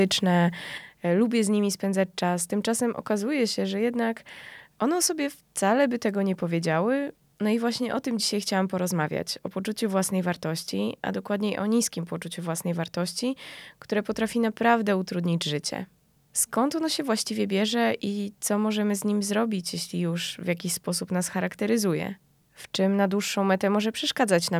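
At 0.78 s the speech level falls abruptly by about 6 dB and stays down to the end of the clip. The likely cause is one channel dropping out: after the mono sum, content shared by both sides loses half its contribution.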